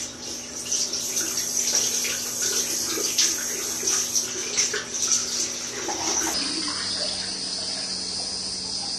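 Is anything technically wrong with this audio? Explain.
Yes. From 6.34 s to the end, there is a section at the wrong speed. The likely cause is that this stretch was resampled or played back against the wrong clock, so it runs at about 0.78 times its proper rate. Because speed and pitch move together here, the sound abruptly drags and drops by roughly four semitones, turning deeper, heavier and more drawn out than the material before 6.34 s.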